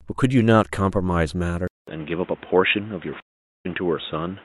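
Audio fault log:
1.68–4.45 s, input switched to a poorer device: after a 200 ms silence the sound turns dull, with nothing above 3.8 kHz and a new noise floor roughly 30 dB down. A narrower microphone is the likely cause, not filtering.
3.20–3.66 s, stream reconnect: a 0.44 s silence, then the audio resumes roughly 0.3 s further on, skipping material rather than pausing it, unlike a simple dropout.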